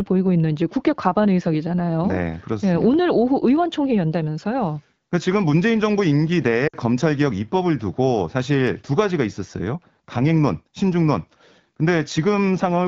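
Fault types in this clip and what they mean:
Lost AMR speech frames: radio errors corrupted frames, so the AMR-WB decoder repeated the last good pitch and vocal tract settings at falling gain. From 6.67 to 6.76 s the speech drops to near silence for about 60 ms, which fits three 20 ms frames.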